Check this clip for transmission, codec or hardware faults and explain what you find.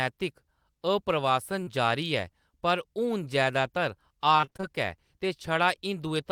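Two transmission faults are audible, both packet loss in the speech.

From 1.63 to 1.69 s there is short concealed packet loss. About 40 ms never arrived. The decoder extended the preceding sound, leaving a brief smear.

From 4.37 to 4.65 s there is repeated packet loss, with a robotic sound. Seven gaps, the longest 23 ms, were patched in quick succession. Half the stretch is synthetic, so it sounds choppy.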